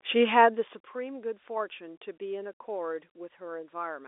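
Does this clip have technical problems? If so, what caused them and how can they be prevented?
No, the signal shows no technical problems: its bandwidth stays steady and consistent throughout and its level changes only smoothly, with nothing that calls for a fix.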